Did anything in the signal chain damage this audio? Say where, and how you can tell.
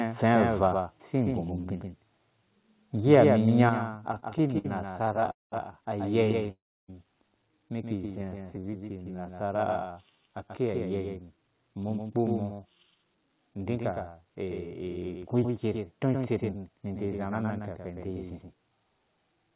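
Yes. A dry, full-band echo trails the sound by about 150 ms throughout, roughly 5 dB down: a doubled audio track, likely a second capture path mixed in late.

Level drops abruptly at 1.02 s by 2 dB and at 3.7 s by 6 dB, the microphone volume stepped down, likely by the call software's gain control.

A harsh, crackling edge on the peak at 3.13 to 3.17 s, about 2 dB over full scale, is microphone overload, likely converter clipping from excessive input volume.

Repeated stalls (stutter) drag the audio between 4.12 and 5.29 s (17 short holds, up to 60 ms), 6.24 to 6.49 s, and 8.25 to 8.65 s, as the jitter buffer repeatedly ran dry.

Sound fades to near silence at 5.31 to 5.54 s and 6.51 to 6.90 s, then resumes without loss: a call audio freeze, likely from packets held up in the network.

From 8.07 to 10.68 s the audio runs about 12% slower at unchanged pitch, drawn out by a jitter buffer slow-down that repeats pitch periods to rebuild its reserve.

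From 12.09 to 18.92 s it runs about 10% faster, sounding hurried, a jitter buffer speed-up that trims short pieces to shed excess delay. The G.711 call path's cut-off at 4 kHz is audible as well.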